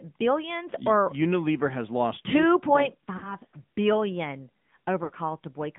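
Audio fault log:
Throughout: AMR narrowband mobile codec. The band runs from 150 Hz to 3.6 kHz, with nothing above. Plainly audible buzzy, synthetic coloration from vocal-tract modelling with sparse pulse excitation suggests a mid-rate mode of roughly 10 kbps.
3.18–3.36 s and 5.04–5.12 s: lost AMR speech frames. After "has lost two point", the decoder repeats the last good pitch and spectral settings at falling gain, so the sound smears and fades. The gaps fit about 40 ms and 60 ms of missing frames.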